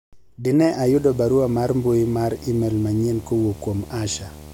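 From 0.86 s to the end, a video or display buzz sits under the speech: a screen or its cable is leaking into the audio path, giving a 75 Hz buzz at the display's field rate with hash on top, around 20 dB below the voice.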